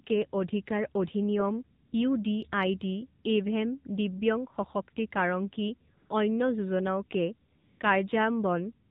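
From the start the speech sounds buzzy and synthetic, with a hard ceiling at 4 kHz. That is the AMR narrowband mobile codec: a vocal-tract model driven by sparse pulses, its plainly audible damage fitting the 7.4 kbps mode. At 1.86–1.92 s, 5.98–6.10 s and 7.56–7.80 s, the real background gives way to a smooth, steady hiss that switches in and out. This is AMR comfort noise. Speech frames stopped for 60, 120 and 240 ms, and the receiver filled each gap with synthetic noise.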